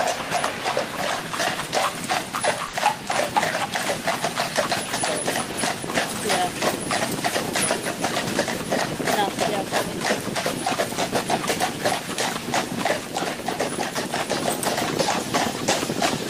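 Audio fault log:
2.67–2.75 s, burst of packet loss: a run of consecutive packets arrived too late or not at all, leaving a 60 ms hole. The receiver bridged it by continuing the last sound it had decoded while turning that sound down, so what is heard is a brief held, fading tone or hiss rather than the real content. Playback then picks up further along, and the 60 ms in between is simply gone.
5.51–5.55 s, short concealed packet loss: a much smaller hole of 20 ms was patched by extending the preceding sound, from its pitch if voiced or as shaped noise if not, then crossfading back into the received audio. The result is a quick smear or wobble in the sound, and any very short element that fell inside those 20 ms does not come through.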